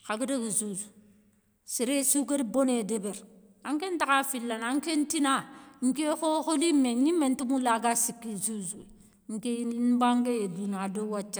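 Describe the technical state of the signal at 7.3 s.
At 7.3 s the speech signal is intact, with no audible technical fault at that moment.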